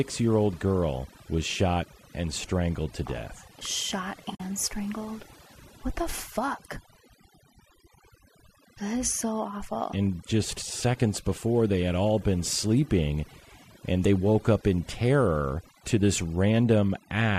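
Overdone noise removal runs through the whole speech clip. The reduction was set too aggressively, so any frequency band sitting near the tool's noise estimate is pushed far down or switched off, and the softer parts of the voice are cut along with the hiss. Between phrases the background drops to near silence dotted with twinkling specks. On a spectrogram the quiet regions look dark and empty, scattered with isolated bright pixels, and the upper harmonics break up into patches.

AAC frame loss with muting leaves a gap from about 4.35 to 4.40 s, roughly 50 ms long, which fits about five of the short frames used by low-delay AAC. The audio here likely passed through AAC-ELD at 64 kbps, and that compression leaves only light damage of its own. The decoder zeroed the spectrum for the missing stretch, and its overlapping windows taper the sound out and back in, so what you hear is a brief soft dropout. 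The waveform shows a smooth fade to a flat line and back. The spectrogram shows a narrow vertical band of silence across every frequency.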